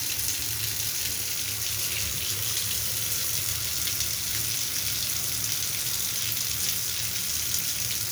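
Nothing in these sounds points to a technical fault; it just runs along without a hitch the whole way.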